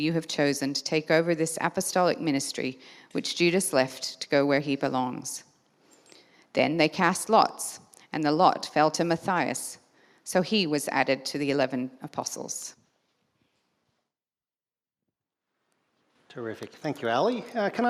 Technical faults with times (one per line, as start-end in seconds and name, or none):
none